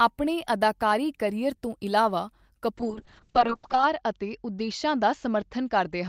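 At 2.79 s, right after "ਅਦਾਕਾਰੀ ਕਰੀਅਰ ਤੋਂ ਇਲਾਵਾ", a call bitrate drop sets in and lasts to the end of the clip. The encoder was forced to spend far fewer bits, with a fall that fits roughly 32 kbps down to 6 kbps. The speech turns coarse and watery, and the top end is cut from 20 kHz to 8 kHz, leaving it muffled. The harshest stretch holds for about 1.05 s.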